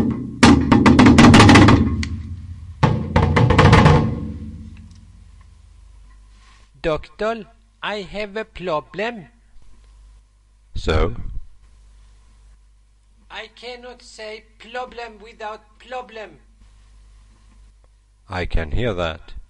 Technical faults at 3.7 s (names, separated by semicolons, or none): none